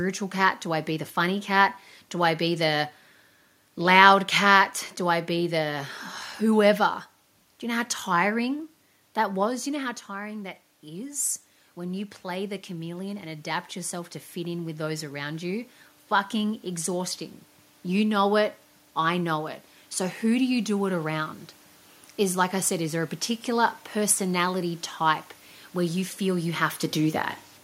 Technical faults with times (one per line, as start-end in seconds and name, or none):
8.46-17.21 automatic gain rising